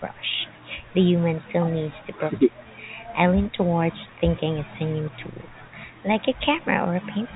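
Speech carried over a G.711 mu-law telephone path, band-limited at 4 kHz with the faint level-following quantisation noise that coding brings, and no technical fault present.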